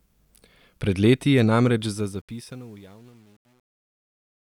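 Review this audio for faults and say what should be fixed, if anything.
Truncation distortion on the fade begins at 1.82 s, right after "leti je", and runs to the end at 4.53 s. As the speech fades out from around 1.8 s, the fade stage drops low-order bits without dither, so the quietest part of the waveform collapses into coarse square steps. From 2.4 s to the end the tail turns gritty, which fits a stage keeping only about 9 bits. Prevent it by applying the fade at full internal resolution and adding dither before any reduction in word length.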